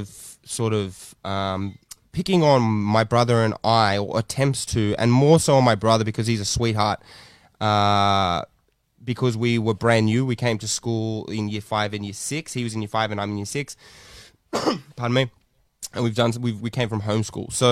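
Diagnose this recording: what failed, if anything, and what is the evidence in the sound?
Nothing failed: no stage of the chain, from capture through to playback, leaves any audible trace on this speech recording, so there is nothing to diagnose.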